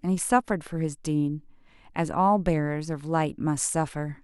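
No technical faults can be heard anywhere in the speech recording; the signal stays continuous and steady throughout.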